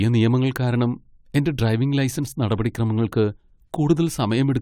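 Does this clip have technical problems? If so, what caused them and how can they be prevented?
No, no technical faults can be heard in this clip. There is nothing here that calls for a fix or a preventive step.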